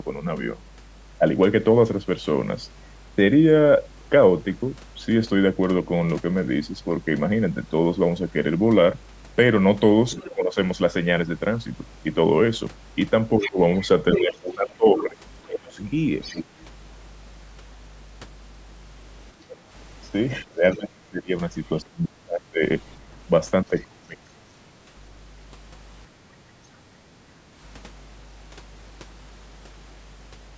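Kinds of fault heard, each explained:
Mains hum: A steady 50 Hz tone, most likely from a ground loop or a nearby transformer coupling the power line into the signal, runs under the whole recording at roughly 15 dB below the speech. On a spectrogram it is a continuous horizontal line at 50 Hz, with faint lines at low multiples above it. On the waveform, pauses between phrases are never flat but carry a slow, regular ripple.
Other side's voice leaking through: A second voice from the far end comes through, likely because the talker's loudspeaker fed into the microphone and the echo canceller left part of it behind. It appears briefly at 10.17 s, for a longer stretch from 13.39 to 15.03 s at nearly speech level, from 16.22 to 16.65 s, and faintly around 23.8 s. A spectrogram shows harmonic traces that do not line up with the main talker's.
Speech suppressed in double talk: When both sides talk at once, the main voice is pulled down in level, likely because the echo canceller cannot separate it from the loudspeaker echo and attenuates both. 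This happens at 10.22–10.57 s, 13.38–15.8 s, 20.44–22.63 s and 23.64–24.37 s, with drops of up to about 35 dB. The waveform envelope shows sudden notches mid-phrase, and the spectrogram shows the speech energy fading or breaking into gaps.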